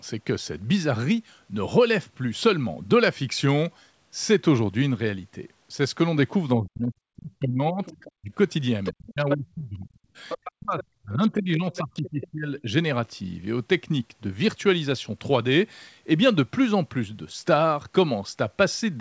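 From 6.57 to 8.32 s, the speech is suppressed in double talk. The voice is pushed down in pieces, by up to around 40 dB. The likely cause is an echo canceller that could not separate the talker from the loudspeaker echo while both sides spoke. It turned both down.

Inside that dip, from 7.84 to 8.12 s, the other side's voice leaks through. It sits about 20 dB below the talker. The likely cause is loudspeaker playback that the echo canceller did not fully remove from the microphone.

The leak returns at 8.84 to 9.35 s, about 10 dB down. From 8.91 to 10.19 s, the talker is suppressed again, by around 35 dB.

Another scrap of the other side, about 10 dB down, follows at 10.29 to 10.84 s. The longest suppression runs from 10.51 to 12.70 s, again near 35 dB deep. Within it, from 11.75 to 12.62 s, the other side leaks through about 20 dB down.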